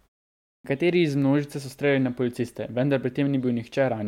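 At 0.55 s, a clipped start after a pause: the output path wakes late from the initial 0.55 s silence, swallowing about 95 ms, so speech begins abruptly.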